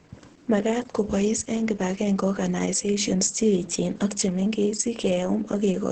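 Throughout the clip, Opus voice compression is heavy: the speech sounds muffled, hoarse and faintly robotic, as the SILK linear-prediction coder rebuilds each segment from a coarsely coded excitation, which points to a bitrate near 10 kbps. The band is limited to wideband, so on a spectrogram nothing appears above 8.5 kHz, leaving a hard ceiling, while harmonics below look smeared and blotchy rather than cleanly striated, and the waveform's fine detail is blurred.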